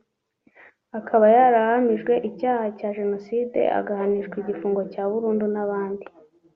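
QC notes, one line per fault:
Nothing to flag on this speech clip, so there's no fault line to log.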